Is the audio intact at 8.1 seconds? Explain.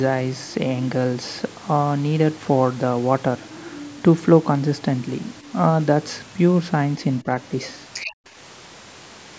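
No. An echo canceller most likely failed to remove the far end's loudspeaker playback from the microphone, so from 7.93 to 8.12 s a second, fainter voice leaks through, well below the main talker. This is the other side's voice leaking through.

Right after, from 8.12 to 8.26 s, the echo canceller clamps down on the microphone while the loudspeaker is active. The room background drops by about 40 dB, nearly to silence, and returns when the canceller releases: background gated by the echo canceller.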